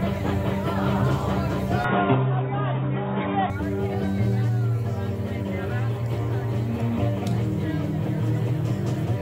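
The input most likely switched to a poorer device from 1.84 to 3.50 s: with no gap and no obvious level change, the audio turns dull and boxy, losing everything above 3.8 kHz, and a faint new background noise appears roughly 35 dB below the signal.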